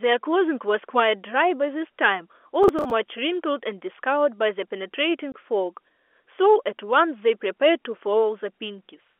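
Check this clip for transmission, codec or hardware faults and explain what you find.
Two separate faults break up the speech, both heard through a telephone-band line that cuts off around 3.4 kHz.

From 2.63 to 2.91 s there is processor overload crackle. The processor repeatedly failed to fill its audio buffers in time, around seven misses in a row, each patched with a stale fragment of old audio. That points to buffers of roughly 10 ms. The result is a gritty, tearing crackle riding on the speech. Unlike packet loss, the gaps are filled with repeated scraps rather than clean silence.

At 5.32 s there is packet loss filled with silence. A 20 ms hole drops out of the speech, which fits a single lost packet that the receiver replaced with nothing. It sounds like one brief, clean cut with hard edges, not a sustained burst of grit.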